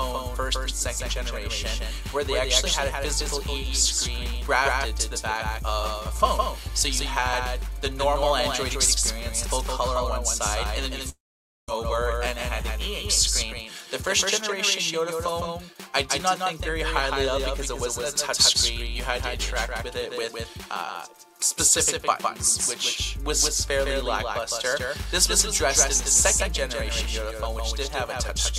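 From start to finish there's a doubled audio track: a second full-band copy trails the first by around 150 ms at about 5 dB down. It's dry and clean, so it sounds like a flat slapback, likely a second capture path running slow.

At 11.09 s there's what sounds like a long network dropout. The last bit of sound smears into a brief fading buzz, then roughly half a second of near-silence, and at 11.69 s the audio picks up with about 0.59 s simply gone.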